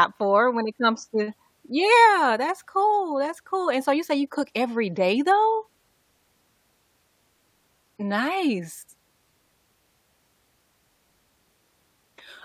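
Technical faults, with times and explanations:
No technical faults can be heard in the speech signal.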